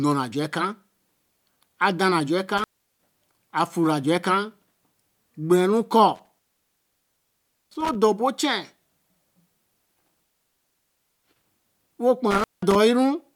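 Speech with an intermittent contact: a loose connection opens at 2.57, 6.15, 9.85 and 12.31 s, cutting the sound for 0.36, 1.3, 0.97 and 0.18 s, with crackle at each edge. The waveform shows near-flat gaps bracketed by spikes. The spectrogram shows vertical click lines around faint hiss.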